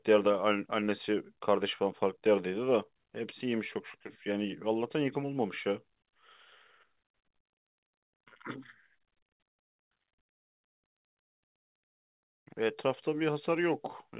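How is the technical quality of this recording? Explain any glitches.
The recording has a narrow call-phone sound with nothing above 4 kHz, consistent with a 64 kbps G.711 path, and a cluster of packet-loss glitches between 10.3 and 12.0 seconds.

Burst of packet loss, at 10.32–10.40 s, 10.86–10.94 s and 11.22–11.36 s: each time, roughly 60 to 120 ms of audio went missing. The receiver stretched the last sound into a fading buzz or hiss, and speech resumes with a piece skipped. The third burst decays to near silence, which marks it apart from the shorter smears.

Jitter buffer slow-down, 10.42–11.99 s: the receiver repeated pitch periods to rebuild its reserve, adding about 40 ms. Speech drags to about 98% speed at unchanged pitch, unlike a loss, where sound drops out.

Short concealed packet loss, at 11.13–11.18 s and 11.76–11.81 s: about 30 ms went missing each time, bridged by roughly 20 ms of extrapolated sound. 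Each is heard as a quick smear or wobble, too brief for the audible buzz or fade of the bursts.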